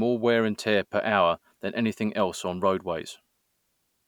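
No technical faults can be heard anywhere in this recording.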